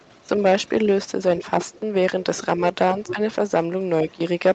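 You can hear a faint second voice under the speech from 0.00 to 0.23 s, most likely the other side's voice leaking through from a loudspeaker the echo canceller didn't fully clean out. It comes back at 1.39–1.43 s (fairly noticeable), 1.63–1.79 s (quieter), 3.07–3.15 s (quite prominent) and 4.09–4.14 s (barely there).

Around 1.38–1.43 s and again at 3.14–3.19 s, the main speech briefly dips by a few dB for about 50 ms each time. That's likely speech suppressed in double talk, with the canceller ducking everything while that leaked voice overlaps.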